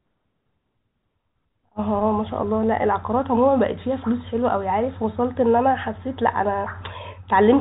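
Nothing goes wrong anywhere in this bit of speech; it just has the narrow, ordinary sound of a normal G.711 telephone line, with nothing above 4 kHz coming through.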